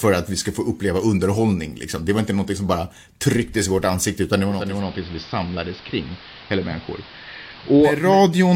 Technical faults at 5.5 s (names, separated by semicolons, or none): digital radio blending to analogue